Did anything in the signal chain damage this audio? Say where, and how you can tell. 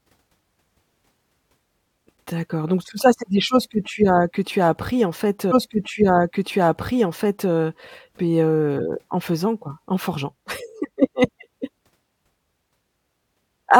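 Yes. The damage sits at the streaming and playback stage: a stream segment repeated. Just after "as appris en fait", at 5.51 s, the audio jumps back and replays about 2.0 s of speech, running until 7.50 s, with a small blip at the splice where the timeline rewinds. The player fetched or queued the same segment twice, so that stretch is heard twice and the programme runs about 2 s longer than it should.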